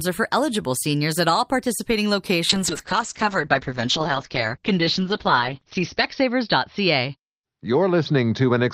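From 2.51 s, right after "seniors at all participating", a call bitrate drop sets in and lasts to the end. The audio bandwidth falls from 20 kHz to 6 kHz, sounding muffled and rough, consistent with Opus moving from about 48 kbps to 8 kbps, bottoming out for 3.6 s.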